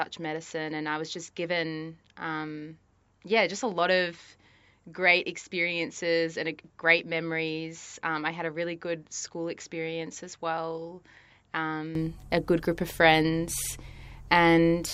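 From the start to 11.95 s the speech sounds duller and roughly 10 dB quieter, with nothing above 7.5 kHz, likely an input switched to a poorer device.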